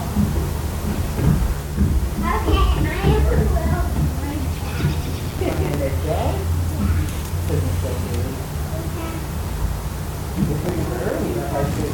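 From 5.25 to 6.06 s the audio breaks into processor overload crackle. The processor is failing to finish its small buffers in time, each only a few milliseconds long, and dozens of deadlines slip in a row. Every missed buffer drops out as a hard-edged gap of silence, and the run of gaps reads as gritty tearing over the sound. A shorter burst of the same crackle returns from 10.64 to 11.13 s.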